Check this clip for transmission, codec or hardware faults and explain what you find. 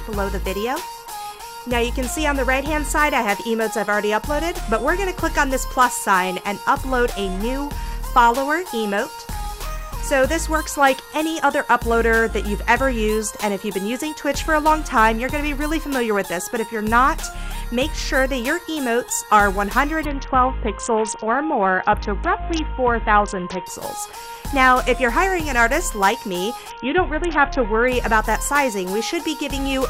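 Two Bluetooth SBC bit pool drops occur, from 20.05 to 23.66 s and from 26.70 to 27.88 s. The link is congested, so the encoder cuts its bit allocation. The top sub-bands starve and the rest are coarsely quantised. The treble dulls and gritty noise rises. The sound points to a fall from a bit pool near 28 to about 6.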